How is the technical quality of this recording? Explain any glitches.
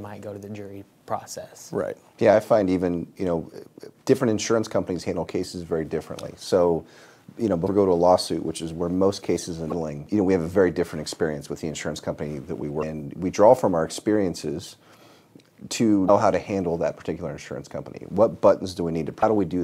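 The recording has one recurring fault: damaged data in a compressed stream, at 7.64–7.69, 9.68–9.72, 12.79–12.83, 16.05–16.10 and 19.19–19.23 s. Corrupted bytes make the decoder misread frames and lose sync, so each spot produces a brief chirp, squawk, click or short hole lasting about 40 ms.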